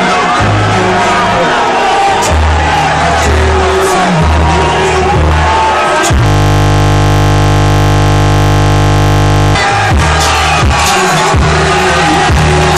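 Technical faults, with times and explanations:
6.26 to 9.55 s: system hang loop. The system froze, and one 20 ms slice of audio repeated about 165 times, producing a steady 50 Hz buzz.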